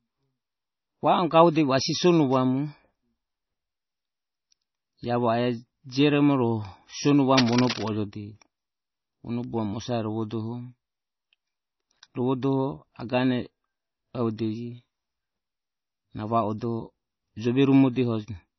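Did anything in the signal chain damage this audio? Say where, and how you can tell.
Yes. At the codec stage, the whole clip has heavy MP3 compression damage: watery, swirling speech with smeared attacks, and nothing above 5.9 kHz. That sounds like a low bitrate, around 24 kbps, zeroing weak frequency lines frame by frame and cutting the treble.

In the analogue wiring, there is cable scratch noise from 7.31 to 7.92 s: a burst of uneven scratching only a little below the speech level. This is likely a worn cable or connector being moved, rapidly changing its contact resistance.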